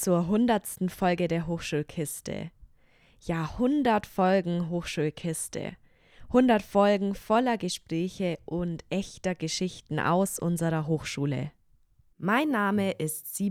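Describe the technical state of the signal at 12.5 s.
At 12.5 s the signal is intact, with no audible fault at that moment.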